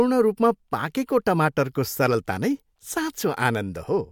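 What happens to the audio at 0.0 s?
Nothing goes wrong at 0.0 s; the audio is intact at that point.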